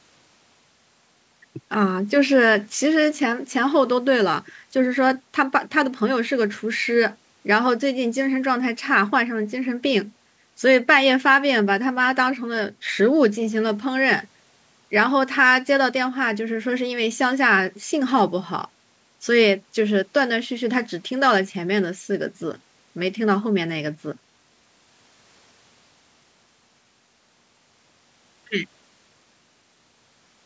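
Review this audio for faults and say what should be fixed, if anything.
Nothing needs fixing, as no faults can be heard in this speech recording. It has passed through a call's microphone processing, which trims the lowest bass and leaves nothing above about 8 kHz, as expected for that path.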